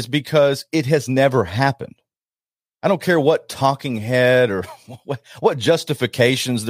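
No technical faults are audible anywhere in the speech.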